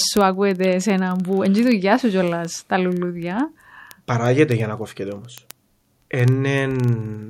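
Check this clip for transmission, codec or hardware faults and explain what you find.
One fault is present, word clock ticks. From 0.12 s to 7.27 s, sharp ticks recur about every 40 ms, roughly 25 per second, during the speech. A receiving clock running around 500 ppm off the sender's drops or repeats a single sample each time they slip.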